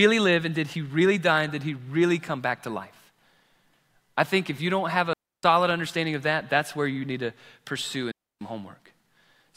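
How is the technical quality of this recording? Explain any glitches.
The recording has two clear interruptions, both digital wireless dropouts. At 5.13 to 5.43 s and again at 8.11 to 8.41 s, the speech vanishes into near silence for about 0.3 s. The receiver lost too much data and muted itself with a very quick fade. Neither gap has a click or noise burst at its edges. On a waveform each appears as a flat, empty band, and on a spectrogram as a clean vertical gap spanning all frequencies.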